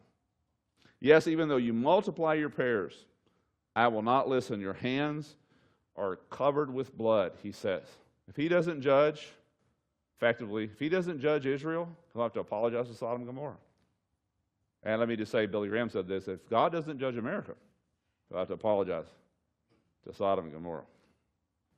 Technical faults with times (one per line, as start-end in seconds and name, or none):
none